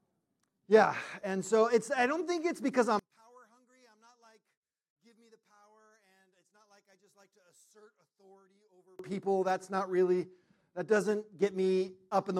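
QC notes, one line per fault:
2.99–8.99 s, one channel inverted: in the mono sum the level falls by about 35 dB for six seconds. The centred content and the low end almost disappear, leaving only a faint residue before full level returns at 8.99 s. The likely cause is one stereo channel with reversed polarity. Material common to both sides cancels when they are summed, so only the small difference between channels survives. The depth of the drop shows the two channels are nearly identical.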